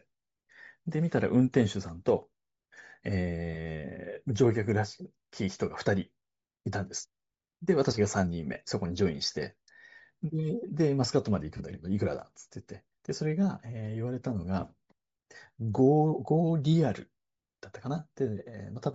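Throughout the speech, the upper frequencies carry a breathy, grainy edge. The codec damage is plainly audible. The cause is likely Bluetooth LC3 compression. The coder discards much of the high-frequency detail and fills the gap with noise. The texture fits a bitrate near 32 kbps.

At 8.54 s a brief 10 ms glitch appears, which fits one set of lost LE Audio frames. At 11.57 s a longer 30 ms gap follows. The decoder repeats the last spectrum with scrambled signs. Each dropout turns into a short, noisy smear.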